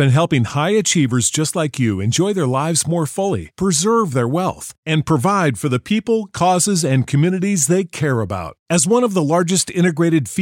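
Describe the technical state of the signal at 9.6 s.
At 9.6 s the speech signal is intact, with no audible fault at that point.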